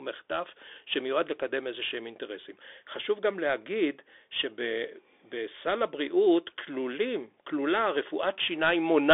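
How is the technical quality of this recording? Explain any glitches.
The technical quality is poor. The speech carries Bluetooth CVSD headset codec damage from start to finish. One-bit slope coding, consistent with a 64 kbps link, limits the band to roughly 300 Hz to 3.6 kHz. Nothing passes above 3.8 kHz, leaving a muffled, grainy, plainly degraded sound.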